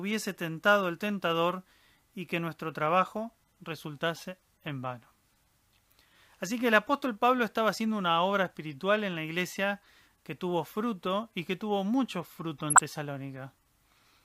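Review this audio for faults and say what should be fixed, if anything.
DAB burbling from 12.68 to 12.79 s, a burst of about 0.12 s where burbling breaks over the sound. Weak reception let bit errors slip past the error correction into the MP2 audio data, so corrupted samples put short noise blips in single sub-bands and corrupted scale factors made sub-bands jump in level for up to a frame. The length fits roughly five consecutive MP2 frames, and the error rate was somewhere around 0.4 percent. To prevent it, improve the antenna and reception so the signal stays above the error-correction threshold, or capture from a cleaner feed.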